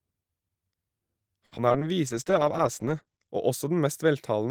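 Repeated packet loss (robotic sound) runs from 1.45 to 1.83 s: five gaps, the longest 60 ms, are patched by stretching the preceding sound, covering about a third of the span. The speech turns choppy, with 80 ms simply missing.

A call bitrate drop follows from 2.09 to 3.37 s, as the encoder falls from 32 to 11 kbps and stays at the low rate for 1.22 s. Coarser coding and a bandwidth cut from 20 kHz to 8 kHz leave the speech rough and muffled.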